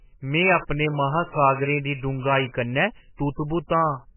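Throughout, the speech sounds muffled and watery, with nothing above about 3 kHz and heavy swirling on every sound. That is likely MP3 compression at a very low bitrate, near 10 kbps, with the treble cut and weak frequency lines flickering between frames.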